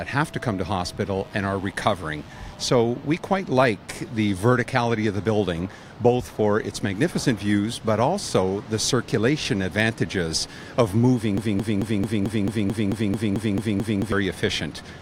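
From 1.19 to 2.69 s a steady, raspy mains buzz sits under the sound at about 30 dB below it. Its harmonics of 50 Hz climb into the kilohertz range, which points to sharp switching spikes from a dimmer, rectifier or missing shield.

From 11.38 to 14.12 s a 220 ms fragment repeats exactly, back to back, twelve times in a broken-record loop, and the audio meant for that stretch is lost. The likely cause is a stalled player, encoder or stream resending the last piece it held.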